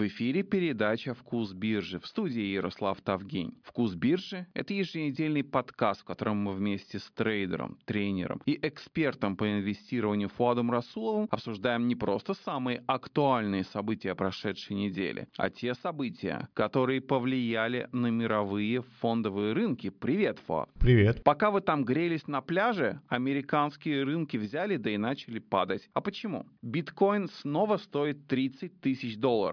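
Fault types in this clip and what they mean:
No fault types are present in the clip, so there is nothing to explain.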